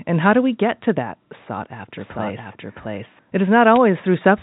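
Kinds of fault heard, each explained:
Bit errors on a digital phone line: Flipped bits in the G.711 stream corrupt individual samples, giving brief sharp ticks at 0.83 s, just after "how do we get", and at 3.76 s.
Doubled audio track: From 1.97 to 3.19 s, after "get to that sought", a dry copy trails about 0.7 s behind at similar level, starting and stopping abruptly, likely from a second capture path.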